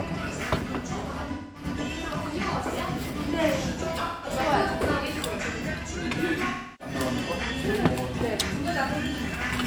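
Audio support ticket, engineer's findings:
AAC frame loss with concealment at 1.33–1.65 s, 4.06–4.30 s and 6.49–6.94 s: smeared, noisy patches where the decoder rebuilds missing frames from the last good spectrum.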